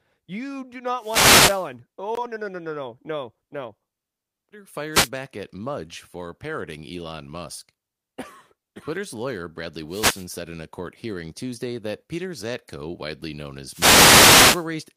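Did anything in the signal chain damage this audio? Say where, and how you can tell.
Yes. Wireless microphone noise hits in the analogue radio link: static swishes at 0.95–1.72 s (after "you do"), 4.92–5.10 s, 9.88–10.27 s (before "said in a court") and 13.66–14.69 s (after "widely known"), as multipath fades let receiver noise cover the speech. Noise is added rather than sound going silent, which rules out network dropouts.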